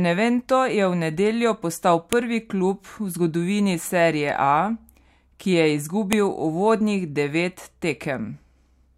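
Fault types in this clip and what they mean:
File header played as audio: speech streamed in pieces about 4 s long, with each piece's WAV header left in, so its bytes play as samples. This gives a sharp, loud click at 2.13 s, after "je v nedeljo postal", and again at 6.13 s, after "ki je".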